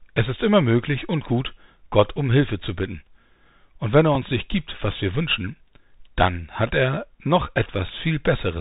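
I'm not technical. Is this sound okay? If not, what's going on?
No. The whole recording went through a Bluetooth headset link using the Bluetooth CVSD headset codec, an old narrowband system built for phone calls. It records each moment only as a tiny step up or down, so it cannot keep up with sudden loud or high sounds and throws away everything above about 4 kHz. The result is muffled, phone-like speech, scratchy s sounds, and a grainy hiss running underneath throughout.

At 4.15 s there is a Bluetooth headset packet repeated. One small chunk of sound, about 3.8 ms long, went missing on its way between the headset and the phone. Instead of leaving a gap, the headset chip simply played the previous chunk a second time. Because only one chunk was lost, you hear this as a brief small tick rather than a longer buzz or dropout.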